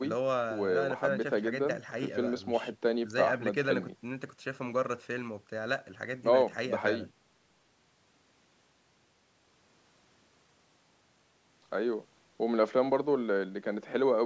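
No technical faults can be heard in this speech; the bandwidth tops out at 8 kHz and the lowest bass is trimmed, as expected from call microphone processing.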